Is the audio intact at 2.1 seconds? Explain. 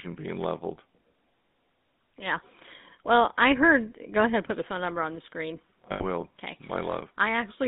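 No. At 2.1 seconds, as throughout, the speech carries GSM full-rate codec damage. The codec rebuilds speech from a vocal-tract filter driven by a sparse pulse excitation, which fits a 13 kbps stream. The band is confined to about 150 Hz to 3.7 kHz, and the speech has a plainly audible buzzy, gravelly roughness.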